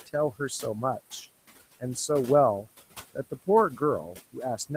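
From start to end, noise suppressor artifacts run under the speech. The suppressor cuts bands it judges to be steady noise by about 17 dB, frame by frame, so the background drops away between phrases and rises again beneath the speech. The room noise, sitting about 16 dB below the speech, is what it keeps pumping.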